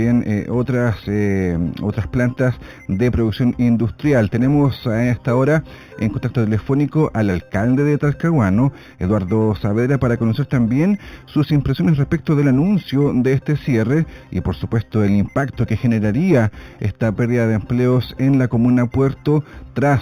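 Imaging from linear upsampling runs through the whole clip. The top of the band is dull, with real content ending near 4 kHz. That fits audio first held at 8 kHz and then raised to 48 kHz. The new samples were filled in by straight lines between the old ones. That is a weak filter. So a mirrored copy of the spectrum remains between 4 kHz and 8 kHz. It sits roughly 35 dB below the signal. It is heard as a faint metallic shimmer on bright, hissy sounds.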